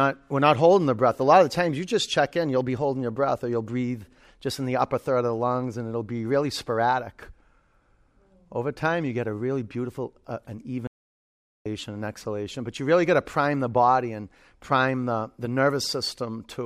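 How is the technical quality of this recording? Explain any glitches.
The recording has one clear glitch, an audio dropout to silence. From 10.87 to 11.66 s, right after "really beautiful uh an", the speech cuts off abruptly and about 0.78 s is lost before it resumes mid-flow at "and exhalation but you". The gap is dead silence with no room tone, likely because the input was briefly lost while the recorder kept writing silence. On a waveform it is a flat line, and on a spectrogram a sharp-edged black band across all frequencies.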